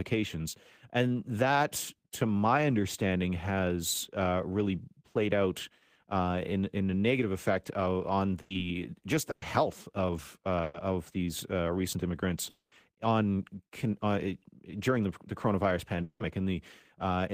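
The clip is speech with three kinds of network fault. A burst of packet loss hits three times: 8.41 to 8.53 s, 9.31 to 9.45 s, and 10.63 to 10.77 s. Each time the last sound is stretched and faded as a buzz or hiss, for 90 ms in the first and 110 ms in the other two. Speech then resumes with 60 ms skipped. A run of consecutive lost packets causes this. The receiver conceals the gap by extending what it last had. Jitter buffer speed-up also occurs three times: 8.63 to 10.15 s at 105 percent speed, 11.76 to 12.13 s at 109 percent, and 14.91 to 15.52 s at 106 percent. Speech sounds hurried but keeps its pitch. The receiver is trimming tiny pitch-period slices to drain excess buffered audio. About a tenth of a second is removed in the first stretch, and a few hundredths in each later one. Two longer gaps follow. From 12.50 to 12.75 s, a fading fill of 220 ms ends in 50 ms of silence, and 180 ms of speech never returns. 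From 16.03 to 16.23 s, a 170 ms fade covers the break, and 120 ms is lost. Both are likely a long network dropout, where no audio arrives for a long stretch.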